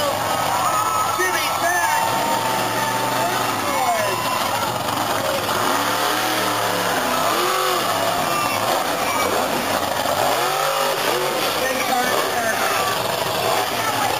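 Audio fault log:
8.18 s, overlap between stream segments: two 6-second stream segments carried overlapping time stamps, and the player trimmed roughly 10 ms of audio that had never actually been duplicated. The waveform jumps across that missing slice, so a single brief click or tiny skip is heard.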